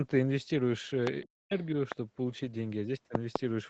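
At 0.89 to 0.91 s a lost packet was rebuilt from error correction: the decoder played the low-bitrate copy carried in the next packet, so there is no gap, but that brief stretch sounds rougher and noisier. At 1.07 s comes the first loud pop, likely a voltage spike from a plug, switch or driver glitch, about 20 dB above the sound, which carries on underneath. From 1.25 to 1.53 s the speech is suppressed in double talk, likely because the echo canceller could not separate the talker from the far end and turned both down, so the voice dips by as much as about 40 dB. At 1.59 to 1.65 s the other side's voice leaks through, likely echo the canceller missed, as a faint scrap about 35 dB below the speech. A second pop at 1.92 s is about 15 dB above the signal. From 2.29 to 2.79 s a longer run of lost packets was rebuilt from error correction, filling about 260 ms with the coarser, noisier copy rather than silence. 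Between 3.15 and 3.38 s two more pops land in quick succession, peaking about 20 dB above the sound.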